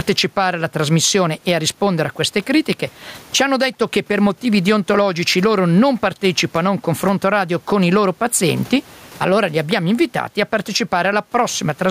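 Speech with gain pumping throughout, a level swing of around 15 dB; the room noise sits about 39 dB below the speech. This is likely from microphone gain set far too high, with a fast limiter clamping down. The waveform looks squashed.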